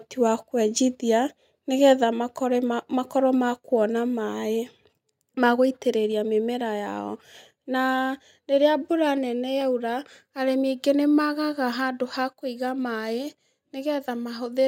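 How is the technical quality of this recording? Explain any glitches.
One glitch stands out in this speech recording. At 2.04 s, everything, voice and background alike, drops by about 3 dB in a single step and stays there. This is likely a microphone volume stepped down: the call software lowering the input level once. Unlike a compressor or fade, there's no gradual ramp and no recovery afterward.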